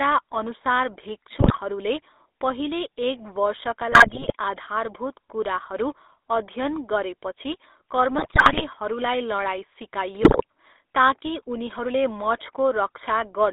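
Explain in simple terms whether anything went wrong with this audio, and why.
The whole recording went through the GSM full-rate codec, the original mobile-phone speech coder, and you can plainly hear it. It rebuilds speech from a rough model of the throat and mouth driven by a coarse pulse signal, so the voice comes out buzzy and gravelly. The sound is also squeezed into a phone-line band of roughly 300 Hz to 3.7 kHz, so it's thin, with no deep bass and no crisp top.

On top of that there are four bursts of GSM bit errors, at 1.39 to 1.6 s, 3.92 to 4.33 s, 8.18 to 8.63 s and 10.22 to 10.43 s. In each one, corrupted data reached the decoder, scrambling the values that set the tone, pitch and loudness of each short chunk of speech. That's why the voice briefly turns into squawks, pops and a gargling mess before settling back.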